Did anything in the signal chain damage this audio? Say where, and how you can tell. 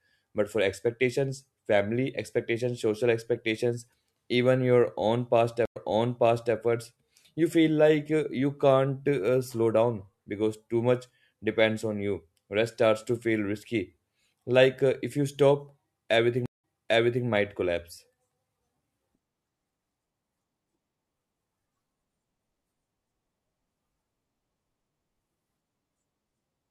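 Yes. The damage is at the network stage: a stream reconnect, twice. After "your own past", the sound drops out for 99 ms at 5.65 s and resumes about 0.79 s earlier, so that stretch is heard again, through 6.55 s. After "if you stop everything", a 173 ms silence at 16.46 s is followed by a 0.62 s repeat, ending at 17.26 s before "might collapse". The connection broke, and a fresh decoder restarted from a resent burst.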